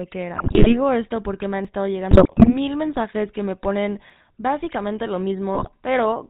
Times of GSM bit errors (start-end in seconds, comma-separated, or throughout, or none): 0.36-0.77, 2.11-2.56, 5.53-5.69